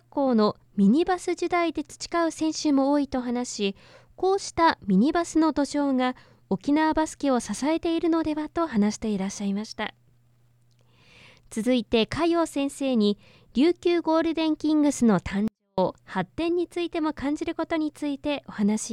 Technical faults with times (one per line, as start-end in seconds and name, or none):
15.48-15.78 24-bit alignment error (too quiet)